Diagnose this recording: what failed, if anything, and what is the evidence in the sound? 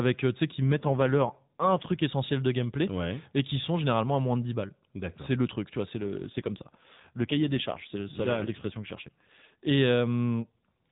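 An AMR rate drop at the codec stage, ordered by the network, affects two stretches: 0.65 to 2.03 s, starting just after "tu sais qui" and recovering before "essentiel de gameplay et", and 6.00 to 9.78 s, following "truc tu vois c'est". The speech turns buzzier and more synthetic, consistent with the AMR-NB coder falling from 12.2 to about 5.9 kbps to spend bits on error protection. Unlike packet loss, there is no gap, and unlike a bandwidth switch, the narrowband ceiling at 4 kHz stays put.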